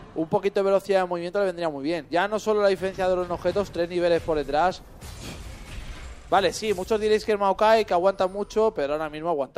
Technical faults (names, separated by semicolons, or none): none